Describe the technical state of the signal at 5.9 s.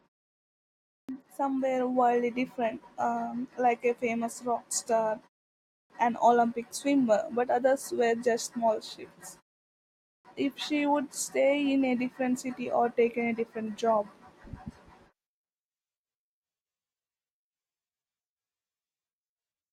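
At 5.9 s the sound bursts in abruptly out of silence with its opening missing: a clipped start after a pause, spanning 5.51 to 5.90 s and losing 389 ms. After a 0.31 s pause, the output device fell asleep and needed that long to wake and resume playback.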